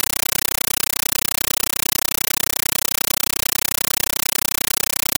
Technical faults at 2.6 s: compressed stream played as audio

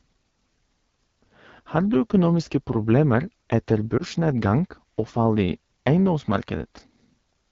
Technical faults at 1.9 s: AMR wideband (HD Voice) codec

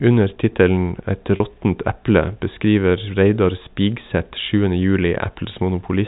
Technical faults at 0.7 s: none

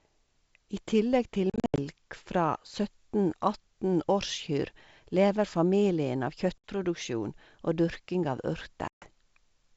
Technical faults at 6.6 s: packet loss on an ADPCM call

